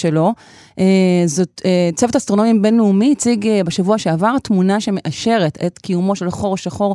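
No technical faults are audible anywhere in the speech recording.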